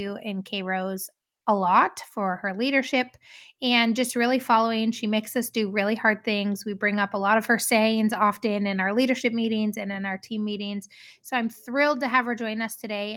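No technical faults can be heard anywhere in the recording; the signal stays continuous and stable throughout.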